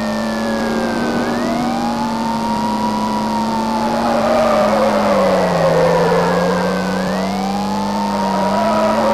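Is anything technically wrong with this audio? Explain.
Yes. Mains buzz runs throughout: switching spikes from 50 Hz power add harmonics reaching several kilohertz, giving a steady, raspy buzz only about 15 dB below the signal.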